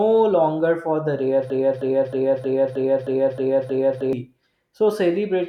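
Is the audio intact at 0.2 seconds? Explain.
Yes, the speech at 0.2 seconds is intact, with no fault to be heard at that moment.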